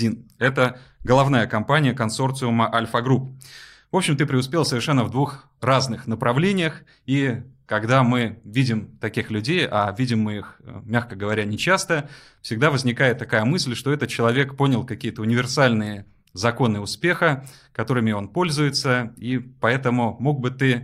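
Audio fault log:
No fault can be heard anywhere in this speech recording. Nothing in it calls for an entry in this log.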